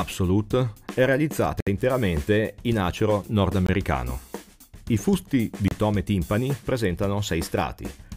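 Gaps between stream segments, where adjoining 2 s segments' timestamps fail to meet, are filled with silence, leaving hard-edged holes at 1.60–1.67 s, 3.66–3.69 s and 5.68–5.71 s (63, 21 and 30 ms).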